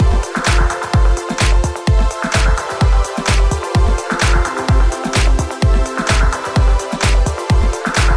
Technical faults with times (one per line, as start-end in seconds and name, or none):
none